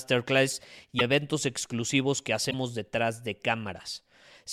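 At 0.98 to 1.01 s, just before "eventos exclusivos que", and again at 2.50 to 2.54 s, between "eventos exclusivos que" and "detrás de", the speech skips ahead with a brief glitch. That's likely a broken MP3 bit reservoir, with dropped frames of about 26 ms leaving the next frame decoding borrowed bytes.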